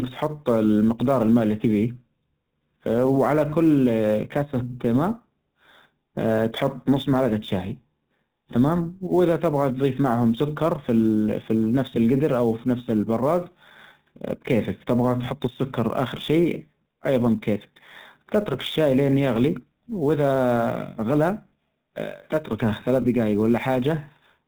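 GSM full-rate codec, present throughout: the speech has been squeezed through a vocal-tract model driven by a regular pulse excitation that keeps only one in every three samples, and the result fits the 13 kbps full-rate coder. Nothing reaches above 4 kHz, so the top of the sound is missing, and the voice carries a plainly audible buzzy, gravelly grain that gets rougher on higher-pitched passages.

Sample clock jitter, also present throughout: the converter's timing wanders by a few microseconds, so each sample is captured a little early or late. Where the waveform changes fastest, that timing error becomes an amplitude error, here at roughly 30 dB below the signal. It is heard as a fine hiss or roughness riding on the speech, strongest on loud and bright moments and gone entirely in the pauses.

Lost GSM frames, at 21.48 to 21.53 s and again at 23.02 to 23.05 s, just after "تتركه خلال ثلاث": the decoder was missing data and reused the settings of the last good frame. 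The first gap lasts 40 ms, which fits two lost frames, and the second lasts 20 ms, which fits one. Each is heard as a brief rough, metallic ring holding the sound in place instead of the speech moving on.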